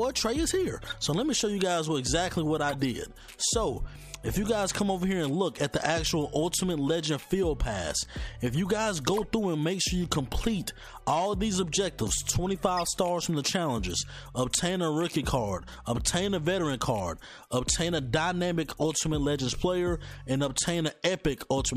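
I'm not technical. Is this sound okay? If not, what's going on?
No. Brief chirps or noise bursts occur at 0.82–0.94, 2.69–2.85, 9.17–9.24 and 12.77–12.88 s. Each is a corrupt frame decoded: damaged compressed data played back as stray sound.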